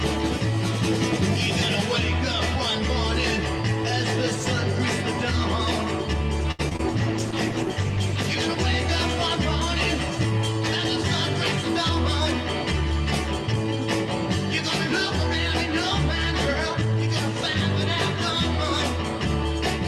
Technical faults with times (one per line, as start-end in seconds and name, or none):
6.51-6.81 repeated packet loss (robotic sound)
6.94-8.43 call bitrate drop